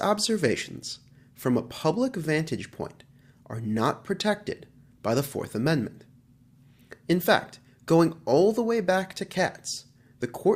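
Nothing technically wrong turns up anywhere in this audio, so there's no fault to point to here.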